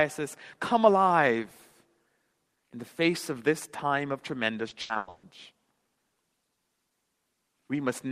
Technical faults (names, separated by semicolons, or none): repeated packet loss (robotic sound)